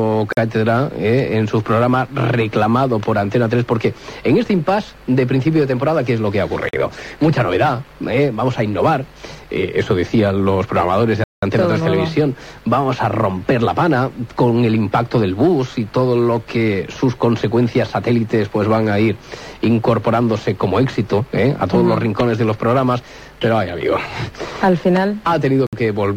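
The audio has four blocks of digital silence, at 0.33, 6.69, 11.24 and 25.67 s. Each cuts out and back with no fade. The 46 ms gaps fit a 2048-sample buffer left unfilled. The 11.24 s hole lasts 186 ms.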